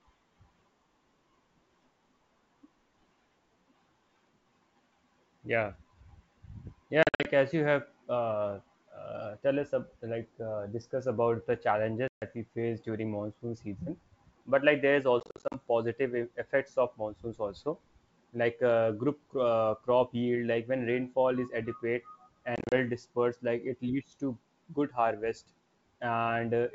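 Speech drops into hard-edged gaps from 7.03 to 7.28 s, just before "as you", where 160 ms vanishes in short holes up to 50 ms long; from 12.08 to 12.23 s, a 140 ms hole between "discuss about the" and "we face during monsoon"; from 15.20 to 15.55 s, 200 ms lost in bursts; and from 22.56 to 22.74 s, 110 ms in runs up to 30 ms. After each hole the wideband G.722 sound resumes slightly distorted. This is packet loss on an ADPCM call. Missing packets are filled with silence, roughly 10 to 20 per event. The decoder's adaptive predictor and step size then lose step with the sender's and need some tens of milliseconds to realign.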